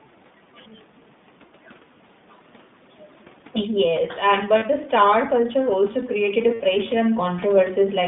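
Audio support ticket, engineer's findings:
iLBC codec, whole clip. Narrowband speech, band about 150 Hz to 3.6 kHz. Nothing above 4 kHz. Rough, slightly synthetic texture, plainly audible. Each 20 ms frame's excitation is coded on its own, with no carry-over from the frame before. The coarseness fits iLBC's 15.2 kbps mode. Room noise is coded poorly, since the codec models speech, not noise.

Automatic gain rising, 3.55 s to 8.03 s. Level drop near 3.5 s as the talker moves back from the mic, about 16 dB quieter at the input. The AGC reads the input as too quiet. Gain climbs slowly, about 8 dB over roughly 4.5 s. Voice and room noise swell together. Only half the drop is recovered, so the level stays below its earlier point.

Lost iLBC frames, 4.58 s to 4.64 s (40 ms) and 6.54 s to 6.61 s (60 ms). A held, buzzy, vowel-like sound fills each gap. The decoder repeats the last pitch cycle mixed with noise, fading through the longer gap. 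The gaps point to two and three lost 20 ms frames. Frames decode independently, so speech returns almost at once after each gap.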